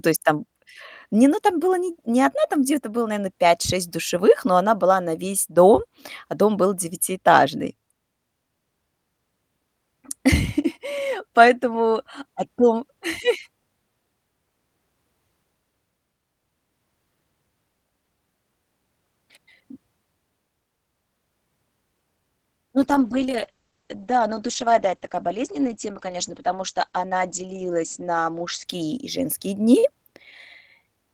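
At 22.78 s the speech goes dull and watery. That's a call bitrate drop. The call's bandwidth estimate fell, so the encoder had to squeeze the audio into far fewer bits. It codes more coarsely, and the top end is cut from around 20 kHz down to 8 kHz. The sound fits a fall from roughly 48 kbps to about 12 kbps and stays at its worst for about 5 s. It recovers by 29.62 s.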